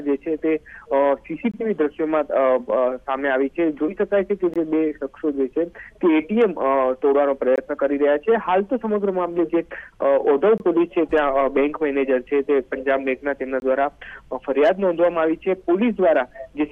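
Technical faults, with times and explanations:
1.51–1.54, 4.54–4.56, 7.56–7.58, 10.58–10.60, 13.60–13.62 s: gap between chunks. A hard-edged 21 ms hole every 3 s, probably codec padding, shows as flat waveform and blank vertical spectrogram stripes.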